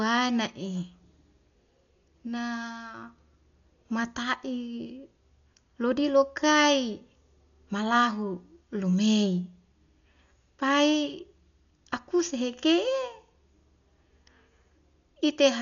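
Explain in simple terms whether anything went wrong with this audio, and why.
Something did go wrong, from start to finish: the speech sounds dull, with nothing above about 6.9 kHz, and a rough, fluttering hiss clings to it. That filler noise, not just missing treble, points to likely heavy Dolby Digital compression rather than simple filtering.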